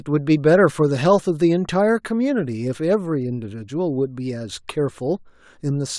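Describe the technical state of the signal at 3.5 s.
At 3.5 s the speech signal is intact, with no audible fault at that moment.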